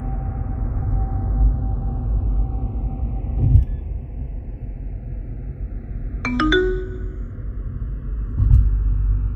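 Channels drifting apart throughout: the two sides run on clocks roughly 70 ppm apart, so their offset creeps toward a millisecond, sweeping comb notches into slow flanging.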